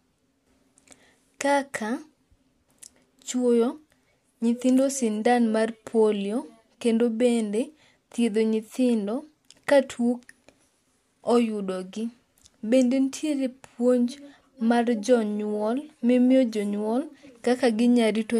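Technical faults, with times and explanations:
No technical faults are audible; the speech signal stays intact and continuous across the whole recording.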